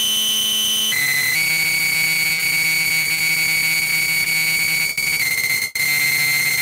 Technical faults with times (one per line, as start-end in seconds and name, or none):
2.33-2.40 short concealed packet loss
2.38-2.40 lost packet rebuilt from error correction
2.82-3.33 short concealed packet loss
3.84-3.88 short concealed packet loss
4.24-4.27 short concealed packet loss